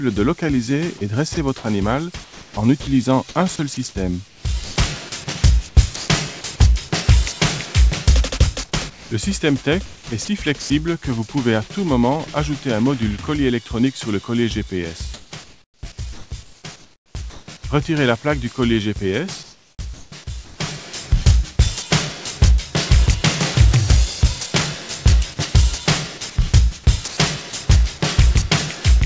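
At 1.34–1.37 s and again at 5.96–6.08 s, sound dropped by the voice detector: brief stretches give way to steady hiss, likely because the sender's detector judged them background. Each is a single gap rather than a series. From 2.24 to 4.76 s and from 8.90 to 10.70 s the sound is chopped by the voice detector. Repeated on-off switching, likely at the sender, replaces about 0.7 s and 0.5 s respectively with synthetic fill, so edges flicker instead of vanishing once. At 15.14–17.48 s, 19.43–20.60 s and 27.08–27.17 s there is comfort noise in place of the background, likely from discontinuous transmission during pauses. The real ambience becomes smooth, featureless noise, at an unchanged level about 24 dB below the loud parts in the last case, with no sound cut. Throughout, nothing is heard above 8 kHz, which fits the G.722 call path.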